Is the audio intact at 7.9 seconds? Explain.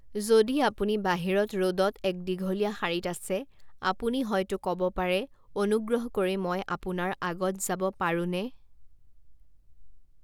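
Yes, the speech at 7.9 seconds is intact, with no dropout, click, distortion or other fault at that moment.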